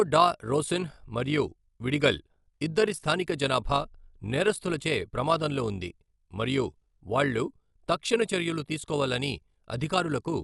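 Throughout, the speech is dull, with rough fluttering noise around tones: likely Dolby Digital compression at around 64 kbps, filling bit-starved bands with dither.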